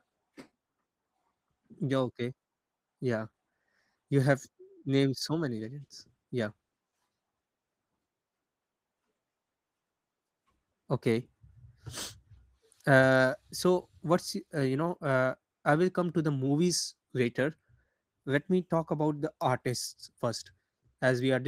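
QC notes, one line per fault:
Throughout, Opus voice compression: the speech has a hoarse, slightly robotic grain because the linear-prediction core codes its excitation coarsely. A thin, coarse top end remains above 8 kHz, fitting a hybrid mode at around 16 kbps. A plain low-pass would remove that top end entirely.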